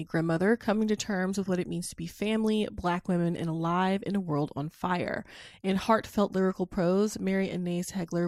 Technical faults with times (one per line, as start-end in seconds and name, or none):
none